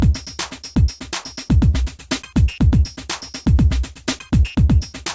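No technical faults can be heard anywhere in the clip.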